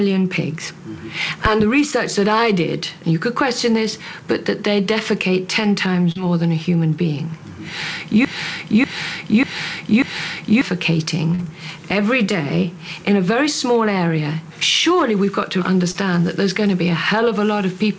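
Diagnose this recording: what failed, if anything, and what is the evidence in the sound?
Brief smears, each a few hundredths of a second, at 6.12, 11.35 and 15.91 s. This is short concealed packet loss on the network leg of the call: about 40 ms of audio arrived too late each time, and the decoder extended the preceding sound to bridge the gap before blending back into real audio.

From 8.25 to 10.61 s a 0.59 s fragment plays four times back to back, a broken-record loop in which the intended audio for that span is gone. The likely cause is a stall in the stream or playback stage that kept resending its last buffered fragment.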